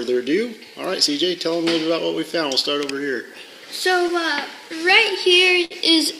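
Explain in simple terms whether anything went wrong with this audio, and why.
Something did go wrong. There is clock drift between sender and receiver: the sending device's clock runs roughly 5% slow, so sound arrives late.

To keep up, the receiver makes repeated timing corrections from 0.24 to 5.55 s. Playback runs at 96% speed, adding about a fifth of a second overall.

At 5.65 s there is a short stall from a late packet. One sound is held 60 ms too long, but nothing is lost.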